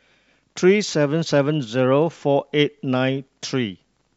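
No faults can be heard anywhere in the recording.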